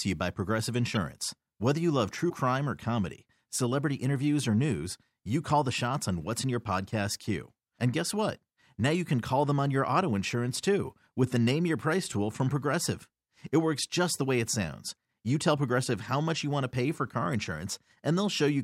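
Speech clip with two corrupt frame decoded faults. Single damaged frames play as brief glitches at 0.95–0.97 s and 2.30–2.33 s, between "you love true" and "or comedy celebrity interviews".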